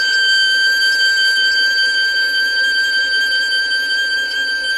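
A short music clip with plainly audible codec damage from start to finish. The top end sounds bright yet synthetic: cymbal-like and sibilant detail turns gritty and metallic, and nothing is present above about 12.3 kHz. This is likely HE-AAC compression at a very low bitrate, in the region of 16 kbps, where only the lower spectrum is coded and the treble is regenerated by copying lower bands upward, so its harmonics no longer match the true source.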